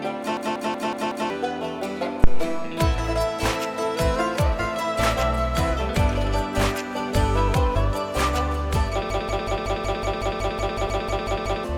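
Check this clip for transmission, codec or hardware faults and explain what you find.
Three kinds of fault are present: two system hang loops, a phantom power thump, and a short skip of compressed frames.

From 0.37 to 1.30 s, and again from 9.10 to 11.64 s, the audio breaks into a rapid machine-gun stutter at about 5.4 repeats per second. The same 186 ms slice plays 5 times in the first stretch and 14 times in the second. This is a system hang loop. The computer or driver stalled while the sound hardware kept replaying its ring buffer, and the loop length fits an 8192-sample buffer. Roughly a second of audio is lost in the first stall and about three seconds in the second.

From 2.24 to 2.70 s there is a deep, low thump that dies away over about 105 ms. It is a phantom power thump. A supply voltage was switched on or off on a live input, and that sudden step passed through the coupling capacitors into the signal path as a single low-frequency pulse.

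At 10.87 s, inside the second loop, the audio jumps forward by roughly 70 ms. This comes from compressed frames being skipped. A few frames, consistent with a 20 ms frame length, were missing or rejected by the decoder.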